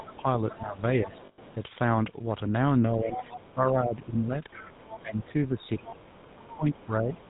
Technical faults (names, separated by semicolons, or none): GSM full-rate codec; lost GSM frames; other side's voice leaking through; speech suppressed in double talk